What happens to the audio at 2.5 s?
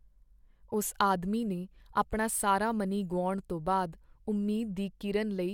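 Nothing goes wrong at 2.5 s; the speech carries on intact through that moment, with no break, click, dropout or change in its sound.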